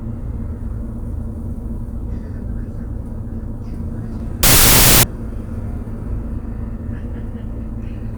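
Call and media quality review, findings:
Wrong sample width, 4.43–5.03 s: loud noise burst, real sound buried underneath at half speed and an octave down. Looks like 32-bit float data read as 16-bit integers.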